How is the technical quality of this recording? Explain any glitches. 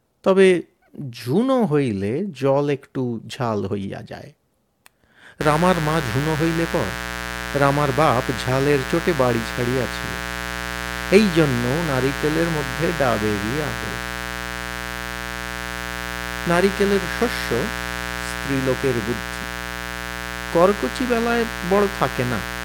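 The speech is marred by mains buzz from 5.41 s to the end of the clip. Sharp electrical spikes enter twice per 60 Hz cycle, so harmonics stack well into the kilohertz range. It sounds like a steady, raspy buzz, roughly 10 dB below the speech.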